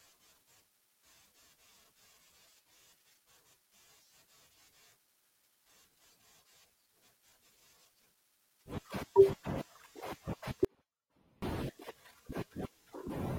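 Speech, with one technical fault: an audio dropout to a faint residue from 10.65 to 11.42 s. The likely cause is a brief loss of the wanted signal upstream while the path after the break stayed live. For about 0.78 s the speech cuts out abruptly rather than pausing or fading, and the gap holds only a faint leak of the sound, roughly 30 dB below its normal level, before the full signal snaps back.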